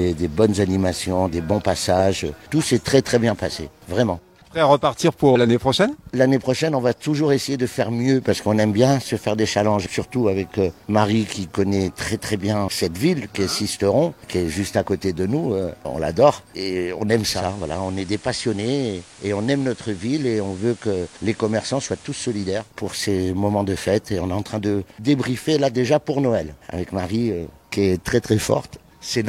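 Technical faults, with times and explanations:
17.30 to 22.74 s, digital radio blending to analogue: the receiver loses its digital stream and cross-fades over about 191 ms to the station's FM broadcast, then comes back. The level drops about 3 dB, and a layer of hiss sits roughly 25 dB under the sound. The hiss comes from the analogue path's higher noise floor.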